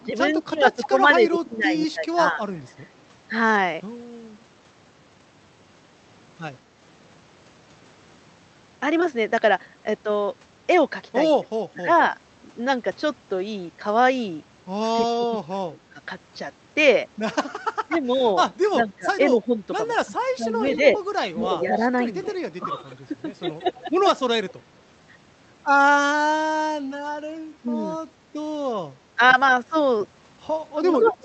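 A speech recording with two recurring call faults. Speech suppressed in double talk appears at 0.04–2.41 s, 11.41–11.89 s, 14.94–24.3 s and 27.61 s to the end. The voice dips by about 15 to 25 dB. The likely cause is an echo canceller ducking its own talker along with the loudspeaker echo while the two overlap. Echo leak is heard at 0.72–2.69 s, 20.7–24.53 s and 31.05–31.11 s. A copy of the voice trails by 199 to 223 ms, roughly 10 to 25 dB below the speech. Loudspeaker pickup that the far end's canceller did not fully remove is the likely source.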